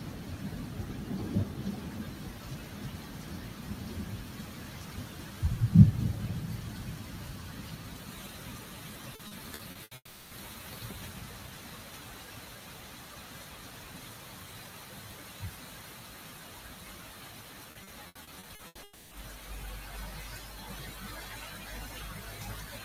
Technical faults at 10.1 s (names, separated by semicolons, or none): noise suppressor applied to music or sounds; long network dropout